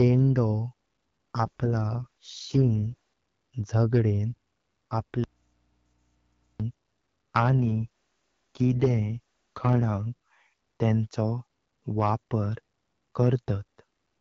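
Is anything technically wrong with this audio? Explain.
Yes, there are two kinds of fault. From 1.39 to 2.94 s and again from 7.6 to 9.84 s there's an AMR rate drop: the codec falls from 12.65 to 6.6 kbit/s, so the speech turns rough and synthetic without losing bandwidth.

From 5.24 to 6.6 s there's an audio dropout to a faint residue. The speech cuts out abruptly for about 1.36 s, leaving only a low hum roughly 45 dB down. That's likely a lost input with the downstream path still live.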